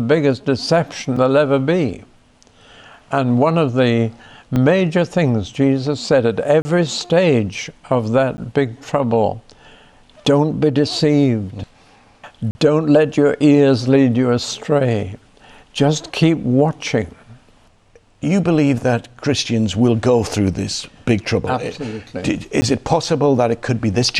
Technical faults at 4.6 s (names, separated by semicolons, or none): block of digital silence